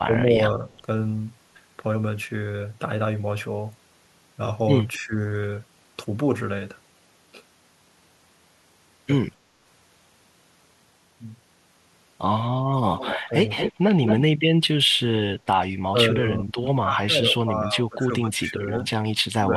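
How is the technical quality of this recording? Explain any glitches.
The recording is compromised by repeated echo-control problems on a two-way call.

Speech suppressed in double talk occurs at 0.03–0.72 s, 4.98–5.14 s, 15.91–18.74 s and 19.29 s to the end. The level ducks by about 15 dB, and about 20 dB in the long stretch, likely because the echo canceller turned this talker down while the far side spoke. The waveform shows sudden sagging envelopes, and the spectrogram thins out there.

Echo leak appears at 0.73–0.81 s and 4.93–4.98 s as faint delayed copies, at about 257 ms. At 12.96–13.73 s and 14.05–14.21 s they return near full level, about 222 ms late. This is likely residual loudspeaker pickup sent back. The spectrogram shows shifted duplicate harmonic traces.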